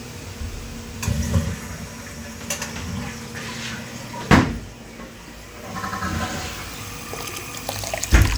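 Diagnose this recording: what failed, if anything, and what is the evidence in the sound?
The driver or buffer stage failed twice with a repeated buffer. From 5.85 to 6.04 s the same 93 ms piece of sound plays twice more, and at 7.34 to 7.43 s once more, each repeat joined with a hard edge. The device, starved of fresh audio, replayed its last buffer, which fits a 4096-sample buffer. Little or nothing is missing afterward. A dropout would leave a gap of silence instead of exact repeats.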